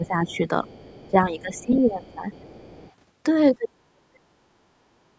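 From 0.0 to 0.67 s the speech dips by about 10 dB. This is speech suppressed in double talk. The likely cause is an echo canceller that could not separate the talker from loudspeaker echo while both sides spoke, so it turned both down.

From 0.28 to 1.11 s a second, faint voice sits under the speech, about 30 dB down. This is the other side's voice leaking through. It is likely loudspeaker sound that the echo canceller failed to remove from the microphone.

From 1.08 to 2.27 s the suppression returns, deeper at about 15 dB. From 1.54 to 2.92 s the faint second voice leaks through again. At 3.6 to 4.27 s the speech drops hard, by about 30 dB.

From 5.11 to 5.17 s the room sound dips by about 8 dB and then returns. This is background gated by the echo canceller. It briefly clamped the microphone while the loudspeaker played.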